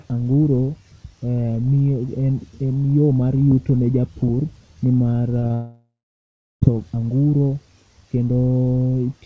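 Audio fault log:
5.40 to 5.44 s and 5.48 to 5.52 s, short concealed packet loss: about 20 ms of audio went missing each time, and the receiver bridged each gap by extending the preceding sound before blending back. The result is two quick smears or wobbles.
5.54 to 6.63 s, long network dropout: the sound breaks off for about 1.1 s, likely because the network stopped delivering audio. The decoder carries the last sound forward as a fading buzz or hiss, then about 0.69 s of silence follows. Audio resumes without the missing stretch.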